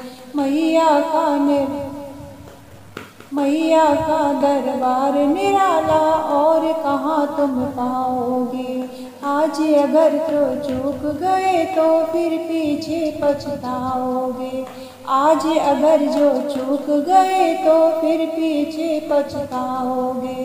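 No technical faults can be heard anywhere in this recording.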